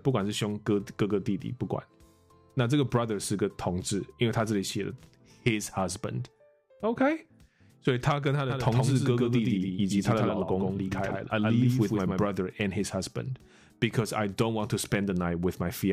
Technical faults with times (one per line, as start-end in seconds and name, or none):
8.50-12.26 doubled audio track